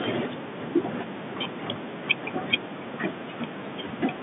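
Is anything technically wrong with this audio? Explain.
No, nothing here points to a technical fault.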